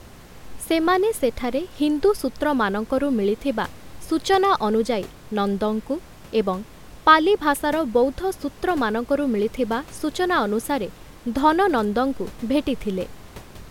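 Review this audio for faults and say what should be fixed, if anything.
Nothing stood out on listening that would need fixing, and the room's background noise sits about 23 dB below the speech.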